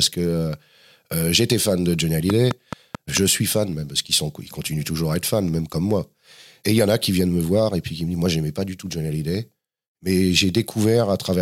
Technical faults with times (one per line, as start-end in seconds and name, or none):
2.30-3.18 train of clicks